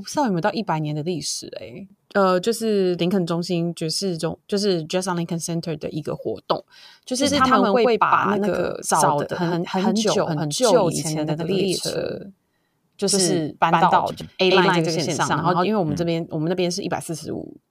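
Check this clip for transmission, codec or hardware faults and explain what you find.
There's one fault here, a doubled audio track in the speech from 7.19 to 15.69 s. For that stretch a second full-band copy of the speech runs about a tenth of a second behind the first, at roughly the same loudness, giving a clattery slapback on every syllable with no room tail to it. It cuts in and drops out abruptly at those two points. The likely cause is a second, slower capture path feeding the same mix.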